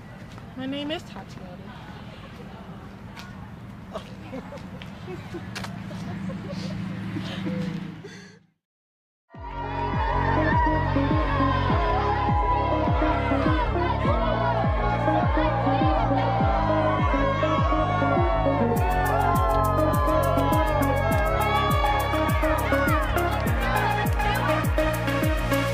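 No technical faults can be heard anywhere in this recording. The audio runs without any break or disturbance that would point to a problem in how it was captured or carried.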